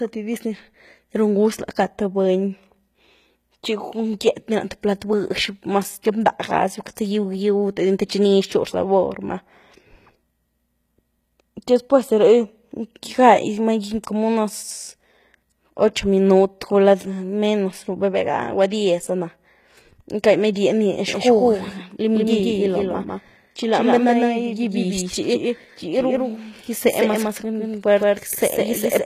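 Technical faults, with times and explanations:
throughout: HE-AAC compression, likely at a low bitrate near 20 kbps, rebuilds the treble from copied lower bands, leaving plainly audible codec damage and nothing above 14.9 kHz.
21.08 s to the end: doubled audio track, likely from a slower second capture path or an out-of-step edit, adds a full-band copy about 150 ms late, at roughly equal level, starting abruptly.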